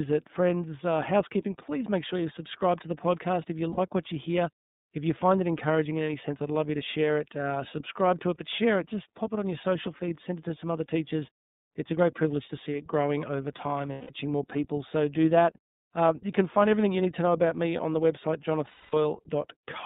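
All the way through, the speech has that iLBC codec sound: a narrow phone-line band from about 150 Hz up to 3.7 kHz, nothing above, and a slightly rough, synthetic edge that's plainly audible. It fits iLBC's 30 ms frame mode at 13.33 kbps. Each frame's excitation is coded on its own, which keeps it robust but costs some naturalness.

Then there are lost iLBC frames, three dropouts that get longer each time. At 3.71 s there's a gap of about 60 ms, about two frames' worth. At 13.92 s it lasts about 180 ms, and from 18.69 s to 18.94 s about 240 ms. In each one the decoder fills the hole by repeating the last pitch cycle with some noise mixed in. That gives a held, buzzy, breathy vowel, and it fades on the two longer losses. Because the frames stand alone, the speech snaps back cleanly right after each gap.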